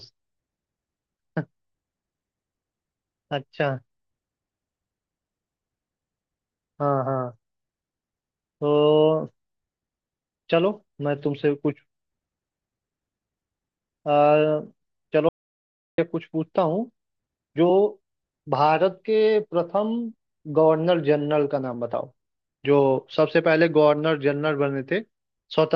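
At 15.29 s the speech cuts off mid-flow in an audio dropout to silence lasting 0.69 s, resuming at 15.98 s. Unlike a natural pause, the gap holds no room tone at all, only silence, so the input was likely lost while recording continued.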